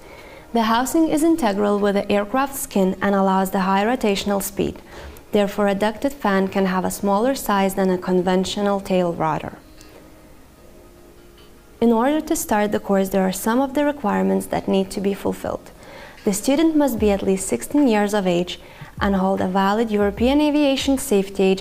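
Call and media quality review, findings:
Nothing stood out on this one, no glitches or dropouts or anything odd to flag from the listen.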